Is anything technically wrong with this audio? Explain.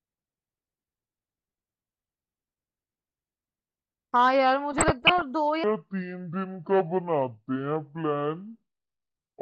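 Yes. From 4.78 to 5.22 s the speech is overlaid with short blips of noise. This is DAB burbling: roughly half a percent of bits were corrupted, putting short noise blips into individual sub-bands.

From 5.64 s to the end, the speech turns deep and slow, about ten semitones down at 0.612 times speed. This section is at the wrong speed, likely from playback against a mismatched clock.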